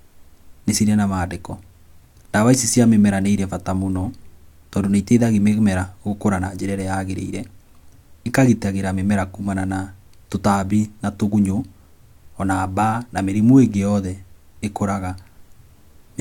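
No technical faults can be heard anywhere in the speech recording, and the signal stays steady and intact throughout.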